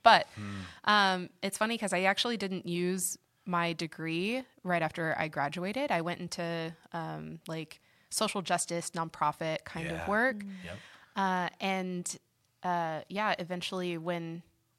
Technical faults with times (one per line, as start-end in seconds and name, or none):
none